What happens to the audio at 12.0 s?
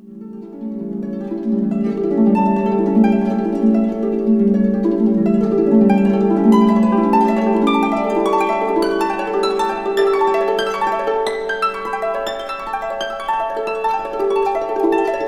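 Nothing goes wrong at 12.0 s; the audio carries on intact through that moment.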